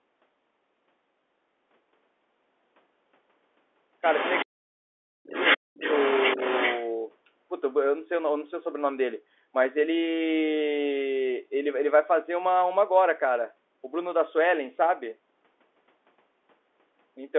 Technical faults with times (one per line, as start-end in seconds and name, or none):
4.01-4.45 other side's voice leaking through
4.43-5.31 speech suppressed in double talk
5.30-6.90 other side's voice leaking through
5.57-5.82 speech suppressed in double talk